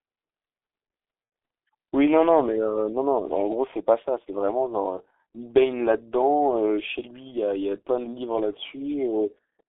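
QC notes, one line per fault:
throughout: G.723.1 codec. The whole clip is squeezed through a low-rate telephony coder at 6.3 kbit/s, heavily damaged, with the line band running from roughly 300 Hz to 3.6 kHz. Nothing above that upper edge survives, so the speech loses its air and brightness and sounds muffled. The coder rebuilds each 30 ms frame from a coarse, slowly updated model of the voice, which turns the voice hoarse and smears consonants into one another.
1.25–1.31 s: VoIP packet loss concealed by the speech codec. About 60 ms of audio never arrived, which fits two consecutive 30 ms frames going missing. The decoder fills the hole by repeating its last pitch and spectral shape while turning the level down frame by frame. This produces a short stretched sound, a buzzy tone or coloured noise, that fades instead of a clean gap. Because each frame is decoded from the previous one, the speech stays weak or distorted just after the gap.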